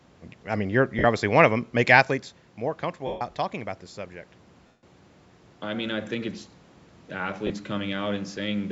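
Lost LE Audio frames break the speech at 0.99–1.04 s, 3.07–3.21 s, 4.67–4.83 s and 7.47–7.50 s. Each gap is filled with a noisy smear of the preceding sound, not silence or a looped stutter. The 140 and 160 ms gaps audibly fade.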